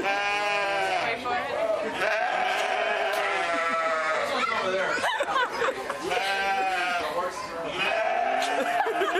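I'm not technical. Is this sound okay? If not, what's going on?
No. There's damaged data in a compressed stream. Broken bits of the file confuse the player, causing brief blips at 0.63–0.65, 2.70–2.72 and 6.99–7.01 seconds.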